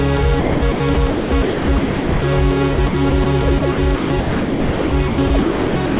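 From 0.4 to 2.22 s, 2.74 to 3.26 s and 3.58 s to the end, the music is chopped, likely by the sender's voice detector. About 1.24 s, 0.14 s and 1.58 s of it become comfort noise. The sound is all limited to below 4 kHz.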